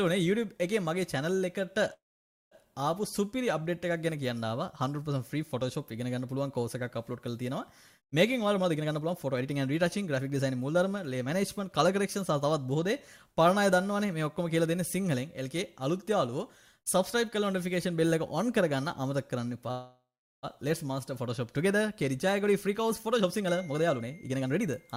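At 1.93 s the audio stalls in a call audio freeze: the last sound trails off into a fading buzz and then about 530 ms of silence before resuming at 2.54 s with nothing lost. That points to delayed packets, which likely drained the jitter buffer and added 580 ms of delay. From 8.46 to 12.33 s a jitter buffer speed-up follows. Playback runs at 114% with unchanged pitch as the receiver trims pitch-period slices, roughly half a second in total, to work off that backlog, so the sound feels hurried. A second freeze spans 19.71 to 20.46 s. A fading tail gives way to about 410 ms of silence, adding 714 ms of delay without losing audio. A further speed-up at 115% then runs from 22.44 s to the end, removing around 0.4 s.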